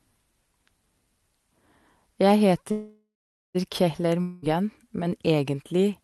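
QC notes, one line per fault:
2.71 to 3.57 s, call audio freeze: the sound stops moving forward for about 0.83 s. The last bit of audio smears into a fading buzz, and the final 0.45 s or so is just silence. Then it picks up exactly where it left off, so nothing is lost but everything after runs about 0.83 s late. The likely cause is packets stalling in transit long enough to drain the jitter buffer, with the receiver stretching the last sound until they turned up.
4.21 to 4.44 s, long network dropout: a roughly 0.22 s hole where the audio is replaced by a buzzy, hissy carry-over of the previous sound. This one is short enough that it never fades to silence. Unlike the freeze, the audio resumes further along, so about 0.22 s of the original is simply gone. That points to a likely run of lost packets that never arrived, concealed by the receiver, on an Opus call path whose top end stops around 12 kHz.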